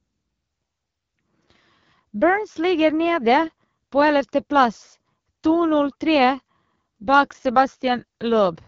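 From start to end the speech carries AMR wideband (HD Voice) codec damage, plainly rough and raspy, fitting a low 8.85 kbit/s rate, with nothing above 7.4 kHz.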